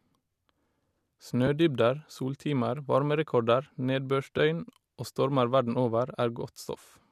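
Speech with two brief AAC frame losses with concealment, at 1.47 s and 4.38 s, where one roughly 10 ms frame drops out and is filled from the previous spectrum. Each shows on a spectrogram as a thin vertical smear of blurred, noisy energy, heard as a short phasey blip. The coding underneath is likely low-delay AAC at 64 kbps, leaving only light coding damage.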